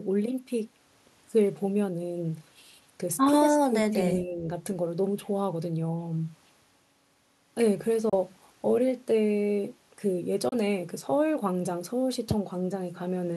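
Speech with two kinds of fault. Between 3.47 and 3.97 s and again from 4.2 to 4.45 s the voice dips by about 20 dB and then about 10 dB. This is likely speech suppressed in double talk, an echo canceller ducking during overlap. At 8.09 to 8.14 s and 10.49 to 10.53 s, silences of about 28 ms, which fits two lost frames each, are likely Bluetooth dropouts. The sound resumes further along, as if it had played on, rather than being filled or repeated as concealment would do.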